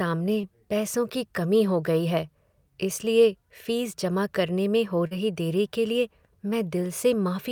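Short concealed packet loss occurs twice: 0.41 to 0.45 s, bridging about 20 ms of missing audio, and 5.07 to 5.13 s, bridging about 40 ms. In each gap the receiver extends the preceding speech before crossfading back, leaving a brief smear or wobble.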